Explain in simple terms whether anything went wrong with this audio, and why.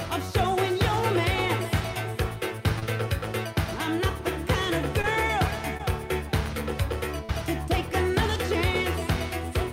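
Four brief smears or wobbles interrupt the sound at 2.79, 5.01, 5.77 and 7.25 seconds. This is short concealed packet loss: tiny chunks, the last about 40 ms, arrived too late, so the receiver covered each gap by stretching the preceding sound.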